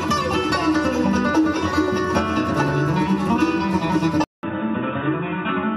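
At 4.24 s the sound cuts to silence for about 0.19 s, then returns duller and boxier, with nothing above 3.8 kHz, a few decibels quieter, and with faint new background noise far below the signal. This points to an input switched to a poorer device, likely a change to another microphone or a headset's call profile. On a spectrogram, the upper band ends abruptly at the gap, and the waveform shows a brief flat line followed by slightly smaller peaks through to the end.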